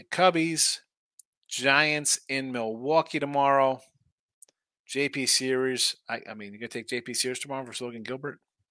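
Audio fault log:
No fault was heard in this speech clip.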